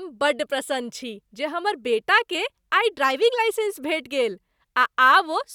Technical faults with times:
none

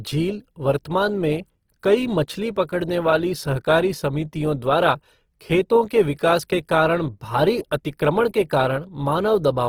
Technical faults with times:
0.00-9.69 Opus compression

